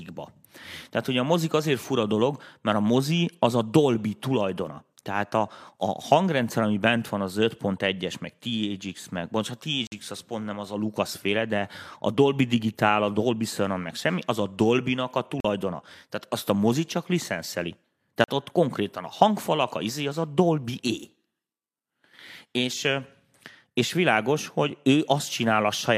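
At 9.87 s, just after "meg bocs a" and before "az pont nem az", the speech drops out for about 51 ms. Two more holes of about 43 ms follow, at 15.40 s and at 18.24 s, the latter between "a mozi csak licenszeli" and "ott konkrétan a hangfalak." These are blocks of digital silence: the output buffer likely went unfilled and was zeroed. The 43 ms gaps fit a 2048-sample buffer.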